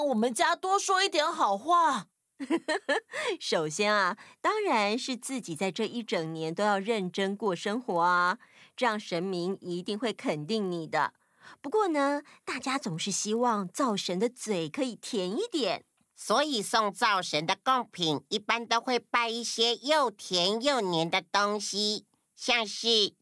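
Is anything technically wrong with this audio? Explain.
Yes. Throughout the speech, the resampler restarts on every block: each 20 ms block is converted from 48 kHz to 24 kHz in isolation, so every edge carries a small error. This produces a 50 Hz buzz present only with signal, seen as faint vertical lines every 20 ms on a spectrogram and tiny steps at block boundaries in the waveform.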